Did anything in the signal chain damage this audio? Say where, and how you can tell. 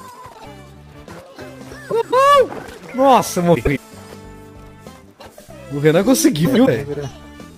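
Yes. Garbled flutters occur at 0.33–0.46 s, 1.90–2.14 s, 3.55–3.78 s and 6.45–6.68 s. These are frames out of order in transport: adjacent blocks of 52 ms, then 104.5 ms, were swapped and decoded that way, losing no time.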